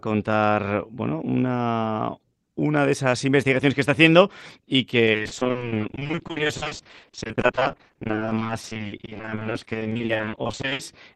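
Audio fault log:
5.05–10.81 s, repeated packet loss (robotic sound): over this stretch the stream drops out again and again in short holes, none longer than 60 ms, and nearly half of the span, about 2.7 s in total, is concealment rather than received audio. Each hole is papered over by extending the last fragment of sound before the next one arrives, so the passage turns choppy, with pieces missing, heard through the Opus call path's 12 kHz band limit.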